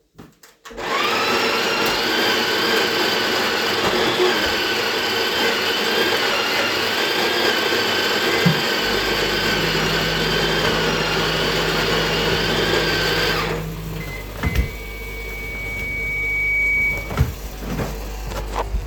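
A microphone picking up the loudspeaker it feeds closes a loop in this recording of everyday sound, and at one frequency the loop gain rises above one, producing a loudspeaker feedback squeal. From 14.44 s to 17.37 s a single tone near 2.3 kHz grows by itself, swelling over about two seconds until it sits at roughly the same level as the wanted sound, a squeal.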